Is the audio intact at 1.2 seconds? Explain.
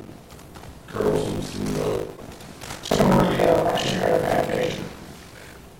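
No. Buffer tearing runs through the whole clip, including 1.2 s. Writer and playback have slipped within the ring buffer. About half of each period repeats audio from roughly 70 ms earlier. That gives a rattling 50 Hz buzz whenever sound plays.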